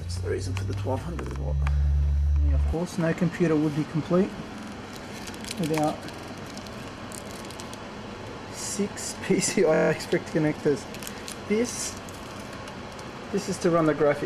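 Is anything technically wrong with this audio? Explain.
Yes, there are repeated frames. At 1.26 to 1.35 s, 4.58 to 4.72 s, 6.16 to 6.30 s and 9.73 to 9.89 s, short chunks of about 23 ms (fitting 1024-sample frames at 44.1 kHz) or 46 ms get decoded again two to seven times. You hear a quick stutter, and each one stretches the audio by 93 to 163 ms.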